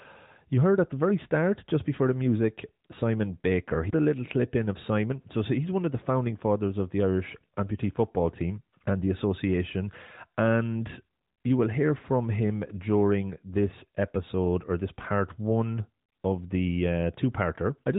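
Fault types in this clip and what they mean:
No faults are present in the speech, which carries the band limit of the AMR narrowband mobile codec, with nothing above 3.8 kHz and only light coding texture that fits the codec's 12.2 kbps mode.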